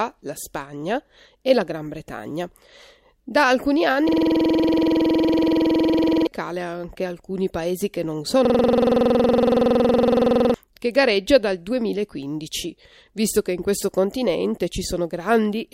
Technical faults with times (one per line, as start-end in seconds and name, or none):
4.09-6.27 system hang loop
8.45-10.54 system hang loop